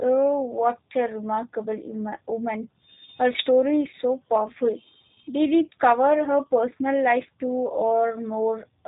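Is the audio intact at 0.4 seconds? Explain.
No, at 0.4 s the speech sounds slightly rough and synthetic, with nothing above 3.8 kHz, as throughout: G.729 codec damage, rebuilding speech from a vocal-tract filter, pitch predictor and sparse pulses, consistent with 8 kbit/s.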